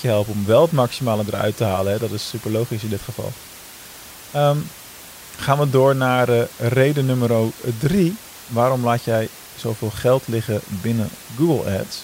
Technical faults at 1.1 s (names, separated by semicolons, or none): none